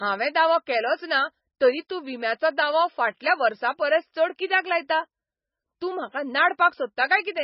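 Throughout the speech, nothing remains above 5.6 kHz, and the sound has a watery, swirling quality with smeared consonant onsets, most likely heavy MP3 compression at a very low bitrate, around 17 kbps. Starved of bits, the encoder cuts the treble and switches weak frequency components on and off between frames.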